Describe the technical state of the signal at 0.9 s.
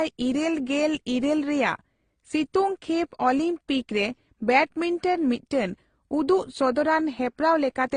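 At 0.9 s the speech sounds dull and layered with mixed compression artefacts: nothing reaches above about 9.7 kHz, and the different codecs' artefacts are heard together. This runs through the whole clip and points to transcoding between lossy codecs, likely a low-rate Opus-style encode passed through HE-AAC and then AAC-LC. Each later encoder spent bits preserving the earlier damage while adding its own, and the lowest cut-off in the chain remained.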